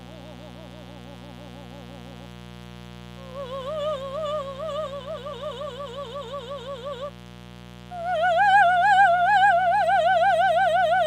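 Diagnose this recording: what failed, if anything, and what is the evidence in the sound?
There's mains buzz on this music, a steady raspy buzz running the whole way through and sitting roughly 20 dB under the music. That's an analogue wiring problem: sharp switching spikes from a dimmer, rectifier or missing shield, twice per 60 Hz cycle, spraying harmonics up into the kilohertz range.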